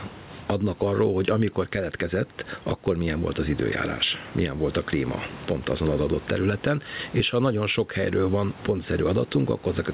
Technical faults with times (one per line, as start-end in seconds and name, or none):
0.00-9.93 gain pumping